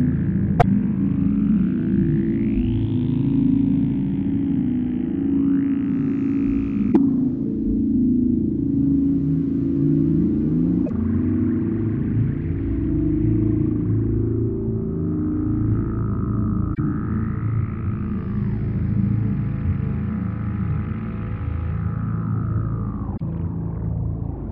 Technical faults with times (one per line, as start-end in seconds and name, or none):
0.56-0.64 damaged data in a compressed stream
6.88-6.97 damaged data in a compressed stream
10.83-10.91 damaged data in a compressed stream
16.71-16.79 damaged data in a compressed stream
23.13-23.21 damaged data in a compressed stream